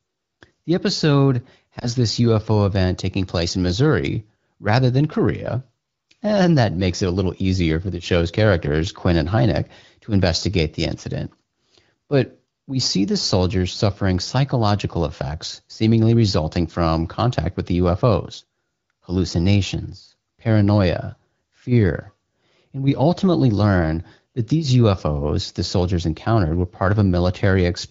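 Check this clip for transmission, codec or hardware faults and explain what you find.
One transmission fault is present in this speech clip. Lost AMR speech frames, 1.80 to 1.89 s: the decoder concealed a corrupted frame by repeating prior pitch and vocal-tract settings at reduced gain, giving a brief dip or warble. The dip is short enough to fit a single lost 20 ms frame. The surrounding AMR wideband (HD Voice) coding sounds clear with only light damage, which fits a rate around 15.85 kbit/s.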